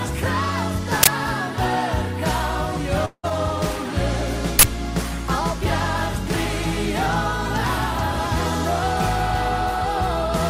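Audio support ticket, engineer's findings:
Uninitialised buffer, 1.03–1.07 s and 4.59–4.63 s: playback block sent out before audio was written, so stale memory read as samples. Heard as a sudden, loud 40 ms burst of harsh digital noise, cutting straight across the sound.

Long network dropout likely, 3.05–3.25 s: audio stops arriving for about 180 ms. Receiver fills the gap by extending the last sound as a decaying buzz, which fades to roughly 50 ms of silence. Sound resumes further on, with that stretch missing.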